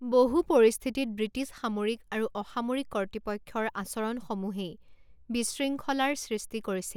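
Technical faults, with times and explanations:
Nothing technical goes wrong anywhere in this bit of speech, so there's nothing to list.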